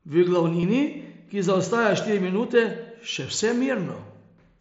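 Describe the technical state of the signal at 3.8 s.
At 3.8 s the speech is intact, with no fault, and the wideband Bluetooth mSBC headset path leaves its light codec grain on louder sounds.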